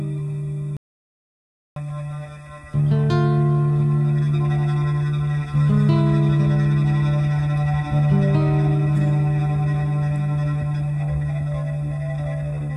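At 0.77 s the sound cuts off abruptly and returns at 1.76 s, an audio dropout to silence lasting about one second. The input was likely lost, through a disconnected device, a failed link or a mute, while recording carried on writing silence, so whatever occurred in that stretch is missing. Unlike a natural pause or a noise gate closing, the gap holds silence with no trace of room tone, and both edges are hard cuts mid-flow.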